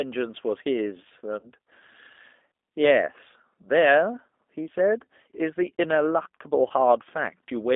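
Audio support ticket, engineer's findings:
G.729 codec, whole clip: speech band-limited to roughly 250 Hz to 3.6 kHz, rough, slightly synthetic texture, plainly audible. Spectrogram: hard ceiling near 3.6 kHz, smeared harmonics. Probable component: low-rate CELP codec on the call path, consistent with 8 kbit/s G.729A, pulse-coded excitation per 10 ms frame.

VoIP packet loss concealed by the speech codec, 1.39 to 1.49 s: brief smear fading out, audio weak for a while after. Waveform: envelope decaying, then slow recovery. Fits about 40 ms lost. Decoder extrapolating last pitch and filter with dropping gain.

Same fault, 6.68 to 6.72 s: shorter dip. Points to a single 20 ms packet lost and concealed by the same decoder.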